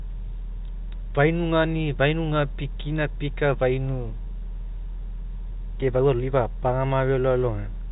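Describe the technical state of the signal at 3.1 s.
At 3.1 s the speech is intact, carried through G.711 telephone coding with its usual narrow band that stops around 3.8 kHz.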